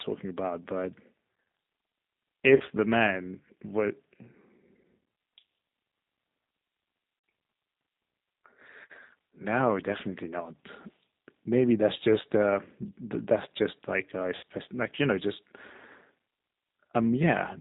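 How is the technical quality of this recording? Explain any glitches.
The quality is limited by narrowband, low-rate speech coding throughout, with three short dropouts that the decoder has patched over.

G.729 codec: across the whole clip the speech is band-limited to 4 kHz and has a slightly rough, synthetic texture, which fits an 8 kbit/s G.729 coder. It rebuilds each 10 ms frame from a vocal-tract filter, a pitch predictor and a few pulses, so fine detail is replaced by this buzzy approximation.

VoIP packet loss concealed by the speech codec: at 2.56 to 2.62 s, 7.19 to 7.24 s and 14.36 to 14.44 s, the speech smears into a fading buzzy tone or coloured noise. With packets missing, the decoder extends the last pitch and filter at falling gain, and the speech stays weak briefly after each gap.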